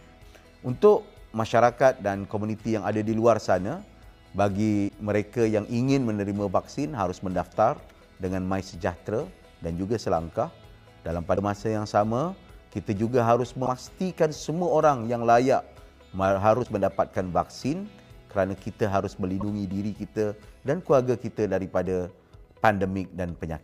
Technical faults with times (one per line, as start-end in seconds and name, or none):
4.87-4.90 broken MP3 bit reservoir
11.35-11.38 broken MP3 bit reservoir
13.65-13.67 broken MP3 bit reservoir
16.63-16.66 broken MP3 bit reservoir
19.40-19.43 broken MP3 bit reservoir